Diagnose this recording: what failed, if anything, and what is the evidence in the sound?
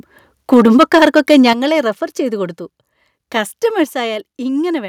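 Microphone overload at the converter, 0.52 to 1.5 s: peaks likely driven about 8 dB past full scale, flat-topped on the waveform in a small share of samples, with harsh broadband smearing on the spectrogram.

Microphone volume stepped down at 0.54 s (about 2 dB) and 1.53 s (about 7 dB), likely by call-processing gain control: the waveform envelope and background drop abruptly at each point.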